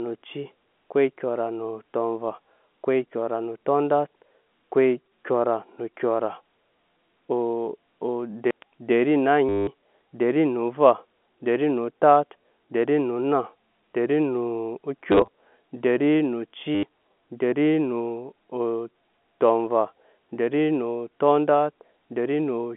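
Packet loss with last packet repeated hits at 9.49 s for 0.18 s, scattered across 15.12–15.28 s, and at 16.75 s for 0.08 s. Replayed packets cause a robotic buzz near 100 Hz, suggesting 10 ms packets. The waveform shows identical repeated blocks.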